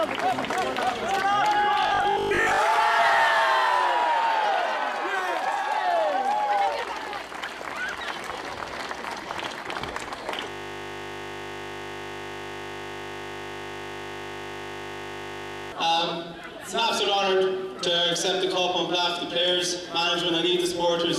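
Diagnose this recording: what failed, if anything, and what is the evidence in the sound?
The driver or buffer stage was likely starved of new audio from 1.83 to 2.59 s. To fill the gap it kept replaying its most recent short block while most of the incoming material was skipped. This is robotic sound from repeated short buffers. The repeats impose a fixed buzz at 50 Hz, which matches a block of about 20 ms. The sound turns rigid and metallic over that stretch, and the underlying audio only loosely shows through.

From 10.50 to 15.72 s there is a system hang loop. The computer or its audio driver froze, but the sound hardware kept cycling through the same ring buffer. A single 20 ms piece of audio plays back identically 261 times in a row. Because the loop is so short, the result is a steady 50 Hz buzz rather than a stutter, and it lasts until the system recovers at 15.72 s.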